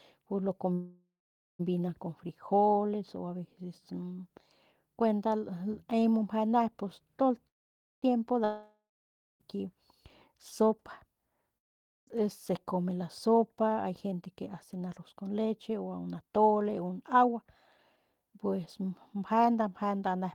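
At 0.73 s the audio stalls for 0.88 s in a call audio freeze, likely from packets held up in transit until the jitter buffer ran empty. The last sound is stretched into a fading buzz, with about 0.48 s of near silence, then speech resumes where it stopped, so nothing is lost, only delayed. A second freeze at 7.47 to 8.04 s likely has the same cause and fills 0.55 s, nearly all of it silent. On a spectrogram each shows the final spectrum smeared flat in time, then a blank band.

A long network dropout runs from 8.44 to 9.42 s, likely a stretch where no packets arrived. A brief fading hiss gives way to about 0.56 s of silence, and speech returns further on with roughly 0.96 s of audio missing, so the sentence jumps. Another, from 11.58 to 12.09 s, is likely caused the same way and is almost entirely silent. It drops about 0.5 s. The waveform shows a flat gap followed by an abrupt restart.

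From 13.28 to 17.44 s a jitter buffer speed-up plays the audio at 108% speed. After a backlog built up, the receiver cut many short pitch-period slices to reduce delay, removing roughly 0.4 s. Pitch stays the same while the delivery sounds hurried. A second speed-up at 17.96 to 19.62 s, also at 108%, trims about 0.15 s. A spectrogram shows syllables compressed in time with unchanged harmonic spacing.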